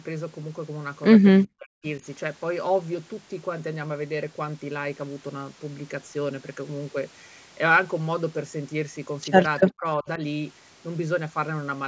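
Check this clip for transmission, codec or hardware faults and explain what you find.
Speech suppressed in double talk shows up twice, from 1.44 to 2.03 s and from 9.64 to 10.2 s. In each window the voice dips hard, down by roughly 40 dB in the first and 35 dB in the second, with a few hundred milliseconds affected. This is likely an echo canceller that could not separate the near talker from loudspeaker echo while both sides spoke, so it ducked everything. Packet-loss gaps sound different: they are abrupt and evenly short, sometimes filled with buzzy concealment. These dropouts are gain-driven and ride the overlap, and the audio has nothing above 8 kHz, the limit of the call path.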